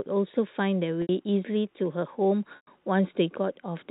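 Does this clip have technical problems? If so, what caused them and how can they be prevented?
Yes. The speech has two dropouts, each covered by packet loss with pitch repetition. At 1.02 s, about 70 ms is lost. At 2.56 s, about 110 ms is lost. The receiver fills each gap by replaying the last pitch cycle. The sound holds on a short buzzy tone, then fades. The second gap is longer, so it fades further toward silence. Both lengths fit runs of lost 10 ms packets. Both gaps sit within the narrow G.711 telephone band. Prioritising voice traffic on the network and adding forward error correction would prevent these losses.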